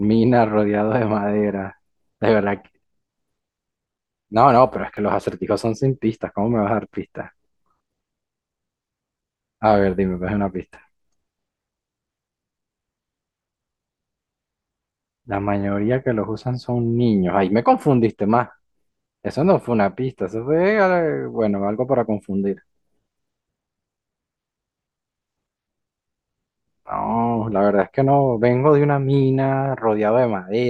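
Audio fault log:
4.97 s and 13.52 s, repeated buffer: at each point a tiny slice of the speech, about 1.33 ms long, which fits a 64-sample buffer, plays five times in a row when fresh audio arrives late. The hard joins between such short copies produce a brief click or buzz rather than a stutter, and essentially nothing is lost.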